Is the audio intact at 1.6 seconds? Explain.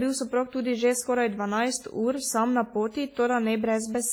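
No, the speech at 1.6 s sounds washy and ringing, with hiss breathing alongside it, as throughout; likely WMA compression at a low bitrate, smearing quantisation noise.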